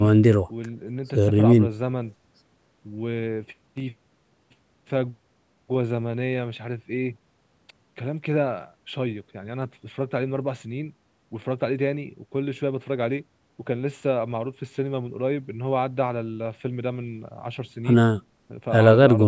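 No technical faults are audible.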